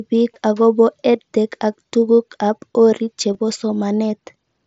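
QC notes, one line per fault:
0.34 s and 3.34 s, concealed Bluetooth headset packet loss: two brief gaps of about 15 ms each in the speech, the second just after "ak tug'uk ab orit". The missing stretch fits a pair of short headset packets dropped between headset and phone. The receiver bridged each gap by repeating the best-matching piece of the waveform just before it, so each gap comes through as a brief buzzy tone held at full level, with a small warble as real audio resumes over the 8 kHz mSBC band.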